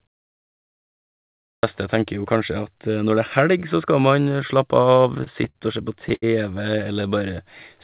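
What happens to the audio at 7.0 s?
Around 7.0 s the audio goes through a jitter buffer slow-down, running from 6.93 to 7.44 s. The receiver's buffer was short of data, so it stretched the signal by repeating individual pitch periods several times in succession, adding about 50 ms and playing this stretch at roughly 92% speed. Pitch stays unchanged, but the sound is audibly drawn out and slightly sluggish over that half-second before normal pacing resumes.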